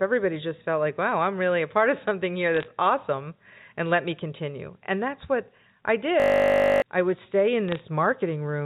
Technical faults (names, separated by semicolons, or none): bit errors on a digital phone line; system hang loop